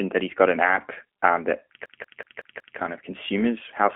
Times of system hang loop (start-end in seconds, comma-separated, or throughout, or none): 1.86-2.79